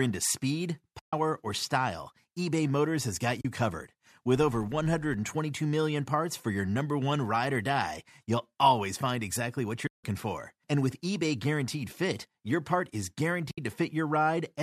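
At 0.99 to 1.13 s and 3.41 to 3.45 s, AAC frame loss with muting leaves gaps of 140 ms and 40 ms. The decoder zeroes the missing frames, and the overlapping windows fade the speech out and back in, giving soft-edged holes.

From 4.35 to 5.16 s, a filter restarted on every block starts each block from silence. This produces a tick train at about 94 Hz, which fits a 512-sample buffer. It is heard as a buzz that rises and falls with the speech level.

AAC frame loss with muting returns at 9.87 to 10.04 s and 13.51 to 13.58 s, with muted gaps of 170 ms and 70 ms that fade softly at both edges.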